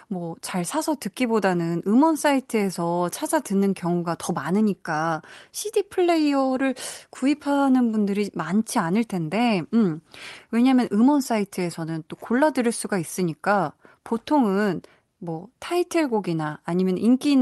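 Nothing goes wrong anywhere in this speech recording; it simply comes through a call path whose codec tops the sound out at around 12 kHz, which fits a super-wideband Opus setting.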